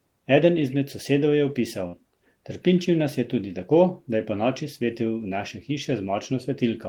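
After "izmed sosedov je opisal", a burst of packet loss at 1.87–1.96 s holds the last sound and fades it, smearing the spectrogram bands, before 60 ms is skipped.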